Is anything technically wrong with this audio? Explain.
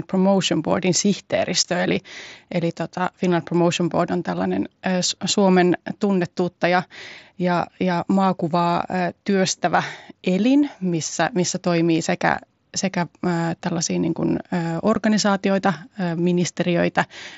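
Yes. There is unconcealed Bluetooth headset packet loss at 1.63 s and again at 14.95 s. Voice packets between headset and phone were dropped and nothing was synthesised to cover them, so each gap is filled with silence or an idle pattern. The first hole lasts about 15 ms, which fits two lost 7.5 ms frames, and the second about 7.5 ms, fitting one. Both are heard as brief dropouts with abrupt edges, over the wideband mSBC link's light graininess.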